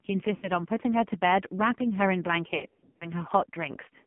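Throughout the speech, the AMR narrowband mobile codec confines everything to a telephone band of about 150 Hz to 3.4 kHz. On a spectrogram this appears as a hard ceiling with nothing above 4 kHz. The damage is heavy, and the buzzy, synthetic texture points to the low 5.9 kbps mode. The vocal tract model is fed so few pulses per subframe that the harmonics look smeared and the voice loses its natural grain.

From 0.36 to 0.51 s there are lost AMR speech frames. About 60 ms of audio is missing, which fits roughly three 20 ms frames failing their checksum. The decoder fills the gap by repeating its last good pitch and spectral settings at falling gain, so the sound stretches into a short warble and dips. On the waveform the envelope sags, and the spectrogram shows frozen, fading harmonic lines.

A longer patch of lost AMR speech frames runs from 2.56 to 3.08 s. About 280 ms of frames drop out, scattered across roughly 440 ms, and the longest single run is 80 ms. 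The sound repeatedly smears, fades and recovers roughly, giving a choppy, gargled stretch. The waveform shows several amplitude holes with ragged restarts, and the spectrogram shows stuck, decaying formant bands broken by brief unbroken slices.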